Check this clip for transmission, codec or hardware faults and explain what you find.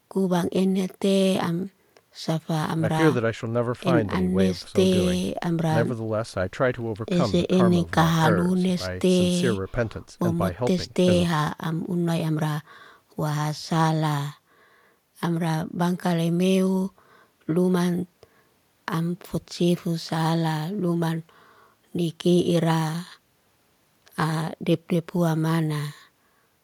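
No faults turn up anywhere in the clip.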